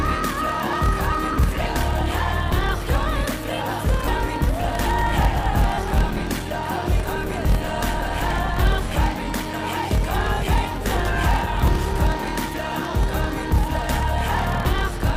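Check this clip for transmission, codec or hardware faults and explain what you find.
Two faults are present: a block size mismatch with padding running through the whole clip, and two short bursts of lost LE Audio frames.

Block size mismatch (padded), throughout: one stage hands over shorter blocks than the next stage reads, and the shortfall in each block is filled with zeros. The result is a steady buzz at about 38.3 Hz, and the audio plays slower, at 0.889 times normal speed, while its pitch stays about where it should be. The ratio fits 1024-sample blocks being read as roughly 1152-sample ones. The unchanged pitch separates this from a sample-rate mismatch, which would shift pitch along with speed. The constant, regular buzz separates it from random dropouts.

Lost LE Audio frames, at 1.33 to 1.35 s and 5.74 to 5.78 s: Bluetooth LE Audio frames went missing, and the LC3 decoder covered each gap by reusing the last good spectrum with randomised signs. 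Tonal content there turns into a brief noisy smear rather than clean silence. The first gap lasts 20 ms and the second 40 ms, which fits two and four 10 ms frames. The smeared, hissy fill is what separates this from a plain dropout or a packet loss that is simply muted.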